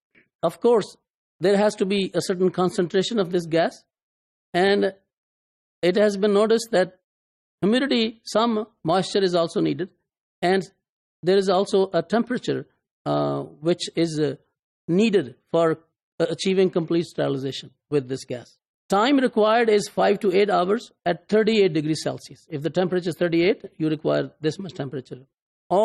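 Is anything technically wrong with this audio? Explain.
No, nothing technically wrong can be heard in this audio. There is nothing here that points to a problem in how it was recorded, processed or delivered.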